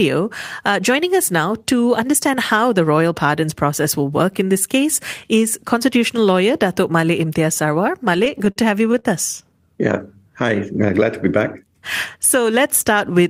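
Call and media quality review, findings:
Repeated stalls (stutter), 8.05 to 9.06 s: speech drags and hitches at eight points. The jitter buffer kept running dry on late packets, so the receiver stretched the last sound. 138 ms filled in total, longest gap 41 ms, nothing lost.

Jitter buffer slow-down, 10.19 to 10.87 s: speech slows to 94% speed at unchanged pitch, with sounds drawn out. The receiver built up buffer reserve by repeating single pitch periods and pause fragments, adding 52 ms.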